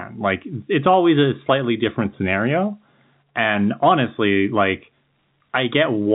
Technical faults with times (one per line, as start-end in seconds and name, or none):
none